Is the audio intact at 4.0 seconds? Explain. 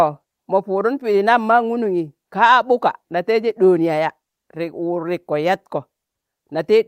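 Yes, the speech at 4.0 seconds is intact, with no fault audible at that moment.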